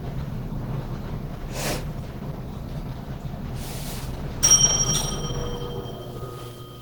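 Opus compression runs from start to finish and is plainly audible. Textures turn rough and grainy, with a hoarse, muffled edge rather than the swirling holes of MP3. The damage likely comes from an encoder starved of bits, which fits a rate near 16 kbps in Opus's hybrid mode. It keeps the full bandwidth but codes the low band as speech and fills the upper bands coarsely.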